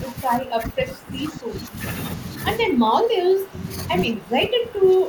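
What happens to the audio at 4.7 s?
At 4.7 s the speech sits inside a stretch of speech suppressed in double talk, running from 4.08 s to the end of the clip. The level is pulled down by up to about 15 dB, likely because an echo canceller, facing both sides talking at once, turned its own talker down along with the echo. Unlike a packet dropout's brief hard gaps, this is a sustained duck lasting about a second.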